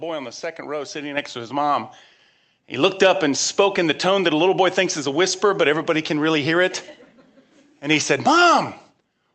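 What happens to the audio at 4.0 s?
Nothing goes wrong at 4.0 s: the speech carries on intact through the call path, with only the ordinary band-limiting of a call codec that tops out around 8 kHz.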